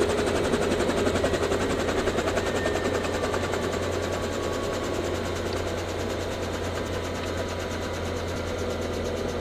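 At 2.16 s, 6.88 s and 8.36 s the sound jumps forward with no silent gap, losing roughly 70 ms at the first and about 40 ms at the others. This is likely a dropped buffer (overrun), which splices rather than mutes, unlike a dropout.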